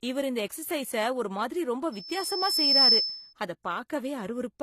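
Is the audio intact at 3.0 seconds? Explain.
No. At 3.0 seconds a piercing tone near 5.3 kHz dominates the speech, having swelled over roughly a second to sit about 10 dB above it. This is loudspeaker feedback squeal, running from 1.92 to 3.33 s: the microphone picks up its own loudspeaker, and at that frequency the loop gain exceeds one, so the tone keeps feeding itself.

Beneath it, the speech has nothing above 14 kHz, with the coding artefacts of more than one codec heard together. This points to transcoding between lossy codecs, likely a low-rate HE-AAC encode followed by AAC-LC, with each stage adding its own damage on top of the last.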